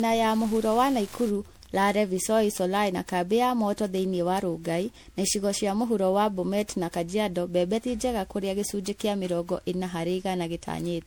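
From 0.0 to 2.0 s, a steady ticking repeats about ten times a second, roughly 30 dB below the speech. This is Wi-Fi interference: a nearby radio's beacon, sent every 102.4 ms, is being rectified by the audio circuit and heard as a train of clicks.

Throughout the clip, the speech sounds swirly, hollow and smeared, with blurred attacks and nothing above 20.6 kHz. The likely cause is generation loss from repeated MP3 decoding and re-encoding, around seven passes. Each pass quantises on a shifted frame grid, so noise and spectral holes build up. The encodes were at 96 kbit/s, yet it sounds worse than that bitrate alone would explain.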